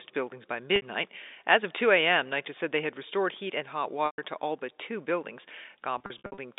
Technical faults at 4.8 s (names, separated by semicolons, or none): none